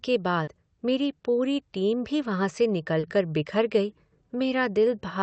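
Speech with two short concealed packet losses, at 0.43 to 0.50 s before "मेरी पूरी टीम भी" and 2.99 to 3.06 s after "टीम भी वहाँ से". Each time, about 40 ms went missing and was filled by extending the previous sound, leaving a brief smear.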